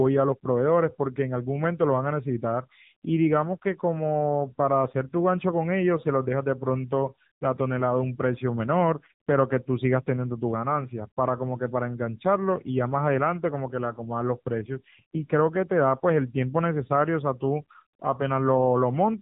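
Throughout, the AMR narrowband mobile codec, at a rate fitting 7.4 kbps, cuts everything above 3.8 kHz and leaves the speech plainly buzzy and synthetic.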